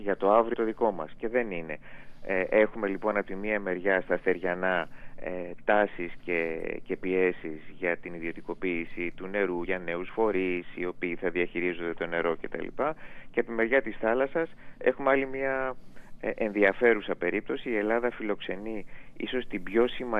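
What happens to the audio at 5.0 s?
At 5.01 s the audio lurches forward. The sound jumps, as though a small piece has been cut out. These are compressed frames skipped: a couple of whole frames were either missing from the file or rejected by the decoder as damaged, so about fifty milliseconds of audio never plays.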